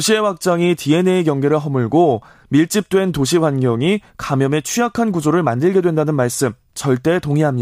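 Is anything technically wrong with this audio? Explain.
No, no technical faults here.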